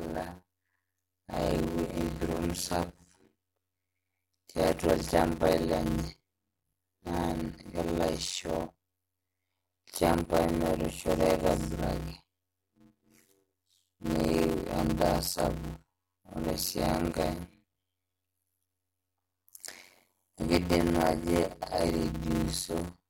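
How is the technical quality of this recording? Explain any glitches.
The technical quality is poor: a steady buzz of about 92 Hz runs through the whole speech clip, and the speech drags at roughly half speed while keeping its timbre. This is a block size mismatch (padded). Each block written, which fits 256 samples, is shorter than the block read, so zeros fill every gap, buzzing at the block rate and slowing playback to 0.533 times normal.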